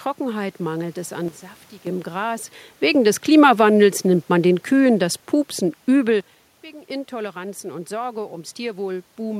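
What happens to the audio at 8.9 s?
At 8.9 s the speech carries on intact, with only the background noise of the room beneath it and no fault from the system.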